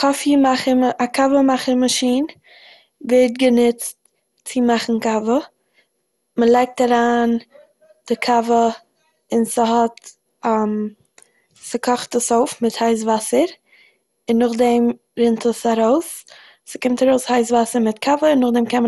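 Speech with generation loss throughout: a swirly, hollow, smeared texture with blurred consonant attacks and nothing above 11.9 kHz. Unlike a single low-bitrate encode, the artefacts exceed what a roughly 96 kbit/s MP2 bitrate implies, likely from around ten repeated re-encodes.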